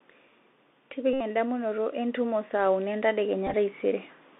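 Throughout, the audio passes through a Bluetooth CVSD headset codec, consistent with its 64 kbps one-bit delta coding. The band is confined to about 250 Hz to 3.6 kHz, with scratchy sibilants and granular hiss.

From 1.0 s to 4.12 s, automatic gain rises as the control judges the input too quiet, swelling speech and background together by about 8 dB.

From 1.13 s to 1.20 s, a Bluetooth headset packet is repeated as lost packets are replaced by re-decoding the previous one. This gives a steady buzz near 267 Hz for about 71 ms.

From 3.47 s to 3.54 s, the packet repeat returns in scattered short runs totalling about 30 ms, heard as brief broken bursts of buzz and ticks.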